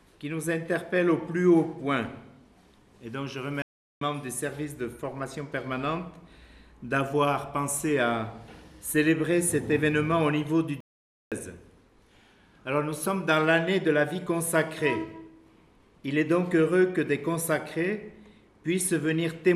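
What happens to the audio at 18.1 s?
Nothing goes wrong at 18.1 s; the audio plays through that moment intact, with no dropout, click or distortion.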